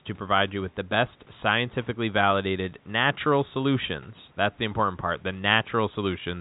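No faults heard in this speech; the G.711 telephone band rolls off around 3.8 kHz, with only the faint level-following quantisation noise of that format.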